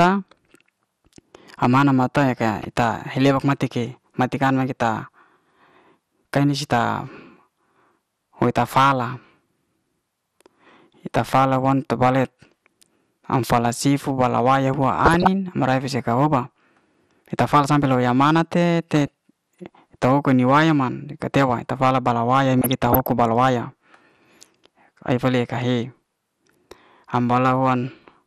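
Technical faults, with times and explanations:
Throughout: MP2 compression. The speech sounds dull, granular and gurgling. The likely cause is a low bitrate near 80 kbps, which leaves too few bits, so upper sub-bands drop out and the remaining bands are coarsely quantised.
2.57–2.65 s, 12.08–12.47 s after "ye ta'fala wan", 15.05–15.27 s after "sifu bala waya huan", 18.96–19.11 s, 22.59–23.06 s before "bala waya": DAB burbling. Reception errors slip past error correction and corrupt samples in the audio data, producing short blips of noise in single sub-bands.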